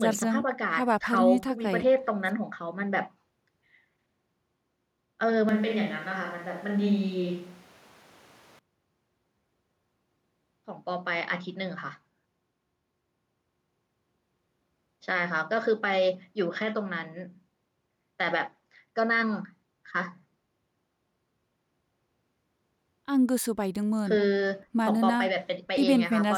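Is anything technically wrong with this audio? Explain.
Yes. From 5.49 s to 8.59 s the speech abruptly turns roomy and hollow, with thinner bass and room noise audible at roughly 30 dB below the speech, though the level barely changes. This is likely a switch to a distant microphone after the close mic dropped out, with an equally sudden return.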